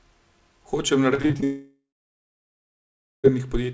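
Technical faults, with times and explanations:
1.14 to 1.44 s, repeated packet loss (robotic sound): the speech breaks into about six brief holes, none longer than about 40 ms, each patched by stretching the preceding sound. Nearly half this span is synthetic fill, giving a choppy texture. Unlike a dropout, real speech keeps returning between holes.
1.44 to 3.33 s, long network dropout: the sound gives way to a stretched, fading continuation of the last syllable, then about 1.4 s of near silence. Roughly 1.8 s of speech never returns, likely because packets stopped arriving entirely. Unlike the choppy stretch before it, there is no intermittent recovery.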